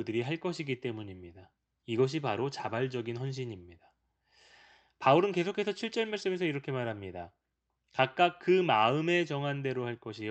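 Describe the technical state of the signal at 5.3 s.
At 5.3 s the speech is intact, with no dropout, glitch or other fault, only the ordinary coding of the call path it travels through.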